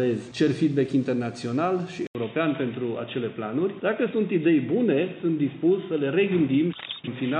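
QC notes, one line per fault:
2.07–7.4 s, input switched to a poorer device: after an 80 ms gap the sound turns dull and boxy, cut off above 3.8 kHz, with new background noise about 30 dB down at the same level. This is likely a narrower-band microphone. The gap and fresh noise set it apart from filtering.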